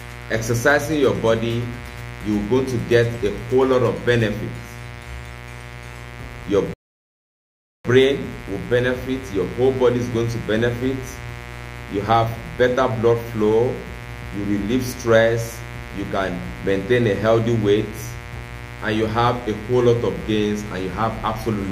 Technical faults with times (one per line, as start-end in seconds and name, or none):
0.00-21.71 mains buzz
6.73-7.85 rebuffering stall